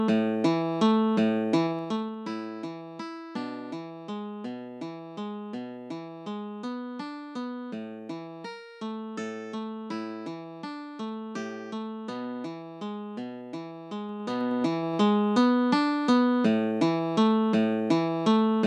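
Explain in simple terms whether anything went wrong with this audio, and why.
A fast ticking, like a zip being pulled, rides on the sound from 1.64 to 2.16 s as it gets quieter, and from 14.04 to 14.96 s as it gets louder. This is zipper noise. The volume moved in small jumps instead of gliding, and each jump makes a tiny click.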